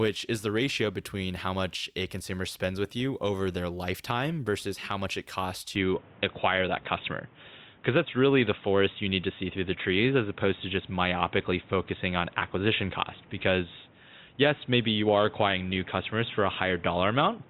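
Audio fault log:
5.76–17.50 s, input switched to a poorer device: after "how much it costs" the sound turns boxy with no gap, likely from a lower-grade microphone taking over. The spectrogram goes empty above 3.8 kHz, the waveform's level steps by around 5 dB, and new background noise sits roughly 30 dB down.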